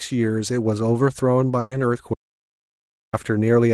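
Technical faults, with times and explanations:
1.59–1.73 s, burst of packet loss: about 120 ms concealed by stretching the last sound, fading down; the spectrogram shows smeared, steady bands dimming, then a sudden jump.
2.14–3.13 s, audio dropout to silence: about one second of silence, likely a lost input; the waveform is a flat line and the spectrogram is blank, without room noise.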